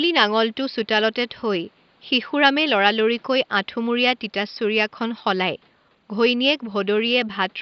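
No technical faults can be heard in the speech, which comes through a Bluetooth mSBC headset codec that passes it up to 8 kHz with only light grain on louder sounds, over room noise sitting about 39 dB below it.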